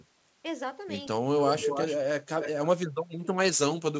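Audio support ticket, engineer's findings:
Echo leak, 1.41–1.97 s and 2.41–2.67 s. Delayed copy of the speech about 280 ms behind, about 5 then 10 dB down. Likely far-end loudspeaker echo escaping cancellation.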